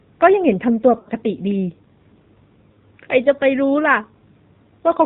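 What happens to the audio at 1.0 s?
Lost AMR speech frames occur from 0.99 to 1.09 s. For about 60 ms, consistent with three 20 ms frames failing, the decoder repeats the last good pitch and vocal-tract settings at falling gain, so the sound smears and sags briefly before recovering rough and weak.

Underneath, the AMR narrowband mobile codec is plainly audible throughout. Nothing above 4 kHz survives, and the buzzy, synthetic texture of the speech points to a low bitrate around 7.4 kbps, where the few pulses per subframe model the voice coarsely.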